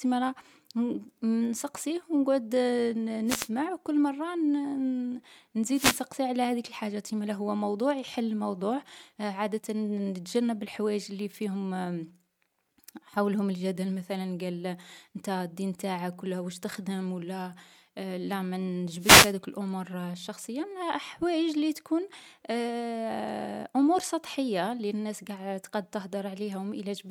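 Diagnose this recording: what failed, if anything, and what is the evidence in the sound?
The analogue FM radio link of the wireless microphone faded as reflections cancelled, letting receiver noise through. These wireless microphone noise hits sound like brief static swishes at 3.26–3.49 s before "وكل مرة", at 5.71–6.06 s before "على هذيك الحاجات إمالا", and at 18.98–19.35 s.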